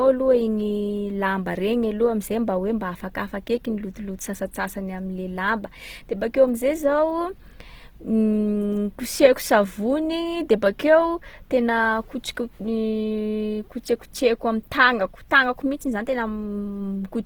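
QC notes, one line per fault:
Throughout: Opus compression, and plainly audible. The speech stays full-band, with content reaching up to about 20.1 kHz, so it isn't muffled. Instead it sounds rough and grainy, with a noisy sheen on the voiced parts. That fits Opus likely running in its CELT music mode at a very low rate, around 16 kbps. Band energies are kept, but the fine detail inside them is rebuilt from folded or noise-filled spectrum, hence the graininess.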